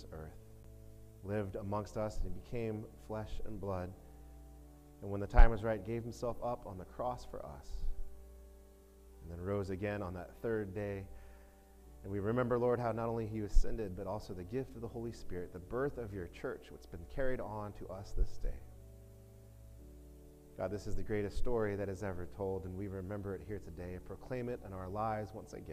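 At 0.63 s there is a CD skip: a knock or disc flaw threw the laser onto another turn of the spiral. A brief mute of roughly ten milliseconds gives a tick, then playback resumes elsewhere. Unlike a dropout, the sound does not pick up where it stopped.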